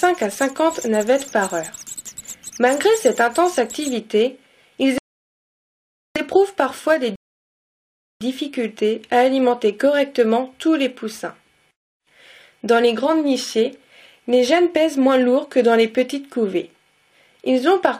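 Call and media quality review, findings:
Rebuffering stall at 4.98–6.16 s and 7.16–8.21 s: the audio drops to silence, then resumes exactly where it stopped, with nothing lost. The player's buffer ran dry and waited for more downloaded data, adding 1.18 s and 1.05 s, 2.23 s in total.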